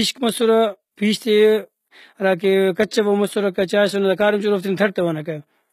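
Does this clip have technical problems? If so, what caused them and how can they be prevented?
Yes. Across the whole speech clip the treble sounds bright but synthetic, with s sounds coming out gritty and lispy, and nothing at all above about 14.9 kHz. This is likely HE-AAC compression: at a bitrate that sounds close to 20 kbps, the codec keeps only the lower spectrum and fills the top by copying lower bands upward, so the rebuilt harmonics don't match the real ones. Encoding at a higher bitrate, or with plain AAC, would prevent it.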